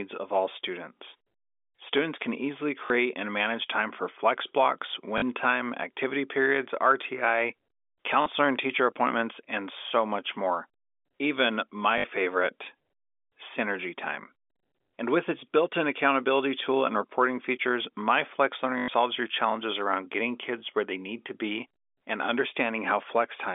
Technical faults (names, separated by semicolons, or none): packet loss with last packet repeated